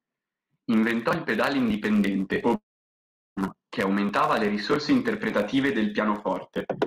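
From 2.55 to 3.39 s, after "il pedale indipendente o", the sound decays into a brief buzz then silence until "che aumentava le risorse", likely a long network dropout losing about 0.8 s.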